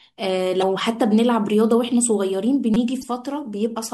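At 0.59 to 0.63 s, and again at 2.99 to 3.04 s, damaged data in the compressed stream makes the decoder misread frames and hunt for the next valid header. Each 44 ms burst comes out as a short glitch unrelated to the speech.

At 2.74 to 2.76 s, a repeated buffer means new audio arrived late and the device replayed the same 5.33 ms slice, which fits a 256-sample buffer, four extra times. The result is a brief buzzy click of identical copies with hard joins, and no jump follows.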